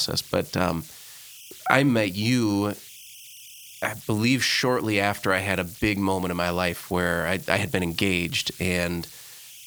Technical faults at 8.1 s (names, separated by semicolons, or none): converter idle tones